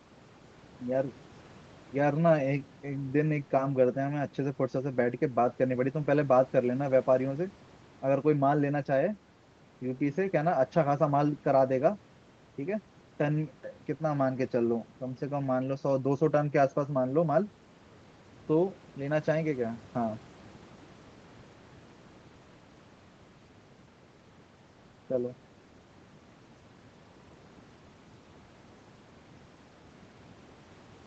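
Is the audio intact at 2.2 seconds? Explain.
Yes, the speech at 2.2 seconds is intact, with no dropout, glitch or other fault at that moment.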